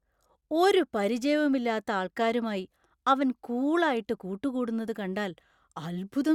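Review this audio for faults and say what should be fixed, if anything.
Nothing stood out on listening to this speech recording, so there is nothing here that needs fixing.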